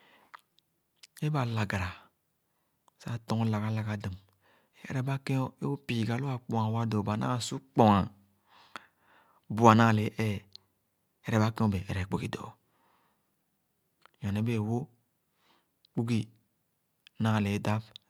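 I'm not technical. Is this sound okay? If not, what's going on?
Yes, it's fine: there's nothing wrong to point to anywhere in this recording, so you can relax about it.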